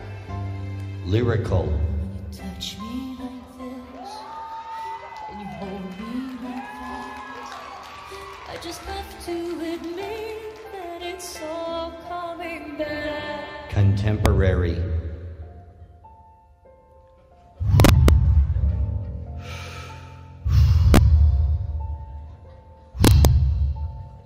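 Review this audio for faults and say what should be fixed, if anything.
Integer overflow occurs at 14.26 s, from 17.80 to 18.09 s, from 20.94 to 20.97 s, and from 23.05 to 23.25 s. On those peaks the level exceeded full scale by about 1 dB, 3 dB, 2 dB and 2 dB respectively. Instead of holding at the limit, each overshooting sample wrapped to the opposite extreme, producing hard, violent cracks far harsher than clipping. To prevent it, use saturating arithmetic or clamp gain and mix sums before converting to integer.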